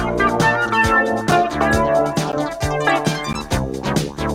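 Mismatched segment time stamps left gaps between stream segments, and the player filled them with silence: hard-edged dropouts of about 12 ms at 2.32 s and 3.33 s, one second apart.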